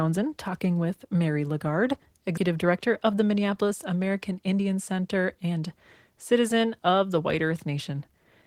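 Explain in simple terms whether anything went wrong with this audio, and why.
A couple of things went wrong here, both tied to how the audio was buffered on the way in.

At 2.37 s there's a skip ahead. About a fifth of a second of speech simply never gets played, and the audio on either side is butted together with no gap. It happened because a chunk was thrown away while later audio was already queued up and waiting, so playback leapt forward instead of pausing.

Right after that, from 2.47 to 3.39 s, you get a jitter buffer speed-up. The speech runs about 6% fast but keeps its normal pitch, so it just sounds a bit hurried. The same thing happens again from 4.35 to 4.75 s, this time about 11% fast. The receiver had more audio stacked up than it wanted, so it trimmed tiny slivers out of the sound over and over to catch up. The first stretch loses roughly 70 ms and the second maybe 50 ms.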